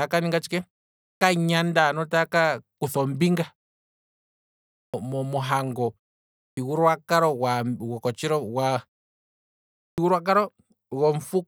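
At 0.97 s after "ninga tshike", then 4.67, 6.32 and 9.75 s, a clipped start after a pause occurs: the output device, sleeping through the silence, wakes late and swallows about 230–270 ms of onset. Waveform and spectrogram show energy beginning abruptly at full level, with no build-up.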